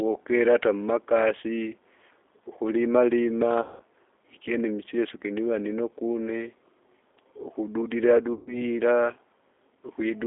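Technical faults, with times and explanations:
throughout, G.729 codec: speech sounds rough, slightly synthetic and thin, held to a telephone band of about 300 Hz to 3.6 kHz by model-based coding at 8 kbit/s.
3.62–3.82 s and 8.33–8.65 s, VoIP packet loss concealed by the speech codec: sound smears into a buzzy, fading drone and stays weak afterwards, as the decoder extrapolates across 180 ms and 140 ms of lost audio, which fits 20 ms packets.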